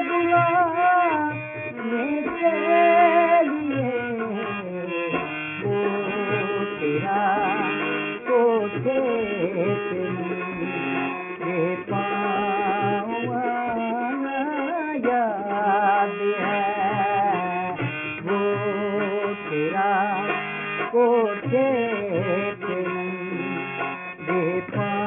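Aliasing runs through the whole audio: everything above 3 kHz folds back into the band as gritty, metallic tones at wrong, unrelated pitches, fairly strong relative to the wanted sound. The spectrum runs hard up to the 3 kHz edge, which fits a drop to a 6 kHz rate with no anti-alias filter first. A properly filtered rate change would just sound dull, not harsh.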